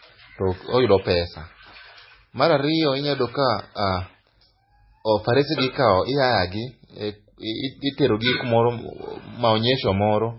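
Right through the speech there's a hard ceiling around 5.5 kHz, with dull, swirly low-bitrate artefacts. It's likely low-bitrate audio saved at a high bitrate: the chain points to a very low-rate MP3 re-encoded generously, which couldn't restore anything the first pass stripped out.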